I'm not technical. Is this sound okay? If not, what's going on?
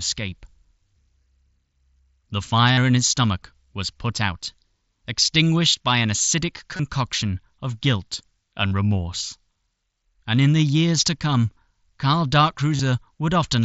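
No. At 2.73 s (just before "in his stomach was"), 6.76 s (after "extinguished by an acidic"), 8.69 s and 12.76 s there's concealed Bluetooth headset packet loss. A few hundredths of a second went missing, and the phone patched each gap with a copy of the sound just before it. Unlike a plain dropout, which goes silent, you hear a brief buzzy smear at full volume.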